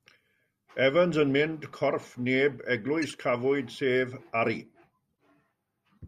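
Two short glitches in the speech come from corrupt frames that the decoder played anyway. At about 2.02 s there's a quick glitch, faint at around -35 dBFS, about as long as a couple of damaged frames. From 3.02 to 3.11 s a louder glitch, near -25 dBFS, spans roughly three frames. In both cases, flipped bits made the decoder misread gains or codes, so energy lands at the wrong frequencies and comes out as a chirp, squeak, blip or burst of noise.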